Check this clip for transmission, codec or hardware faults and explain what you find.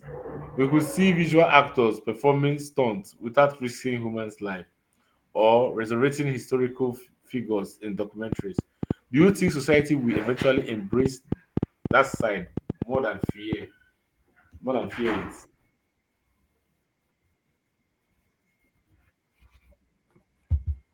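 There is one fault, a train of clicks. From 8.3 to 13.5 s, sharp clicks of much the same shape land on the speech, about thirty in all. They average around 5.6 per second but at an uneven spacing. Their peaks stand roughly 15 dB above the speech. The likely cause is electrical interference or a faulty connection or power supply, injecting brief pulses into the signal path. They are heard as ticking and popping, in the pauses too.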